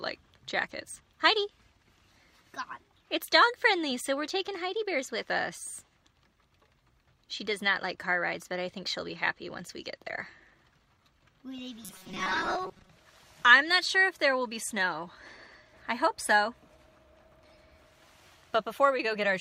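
Audio likely arrived too seldom from 11.84 to 12.90 s, so about half was filled by repeated short buffers, giving robotic sound: a rigid, metallic 188 Hz buzz.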